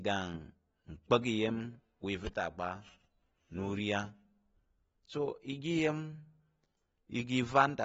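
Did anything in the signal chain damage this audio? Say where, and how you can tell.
Yes, at the codec stage, throughout the speech. Nothing sounds above 7.7 kHz, and the sibilants have a smeared, fizzy texture. That pattern is likely AAC compression at a low bitrate, where the encoder cuts the top band and coarsely quantises what remains.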